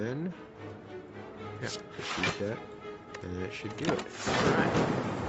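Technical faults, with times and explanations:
No technical faults are heard, so there are no times or explanations to give.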